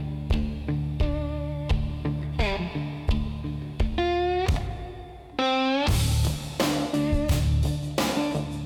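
No technical faults can be heard in this audio.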